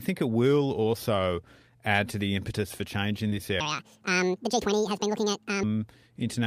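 Right after "the impetus for change", around 3.27 to 3.34 s, there's a short concealed packet loss. About 40 ms of audio didn't reach the decoder in time, and the receiver patched roughly 38 ms of it by carrying the last bit of speech forward, then fading back into the real signal. You hear it as a quick smeary wobble.

Then from 3.60 to 5.63 s the speech suddenly runs at 1.81 times normal speed, so it comes out rushed and chipmunky, pitched up by about ten semitones, with speed and pitch jumping together. The likely cause is that this stretch was played or edited against the wrong clock. Just over two seconds of audio gets squeezed, and it snaps back to normal speed at 5.63 s.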